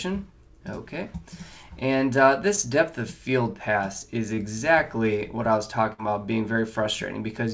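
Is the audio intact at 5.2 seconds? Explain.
Yes, the audio is intact at 5.2 seconds, with no dropout, glitch or other fault there, only the ordinary band limit of the call path, which points to a wideband codec such as G.722 with nothing above 8 kHz.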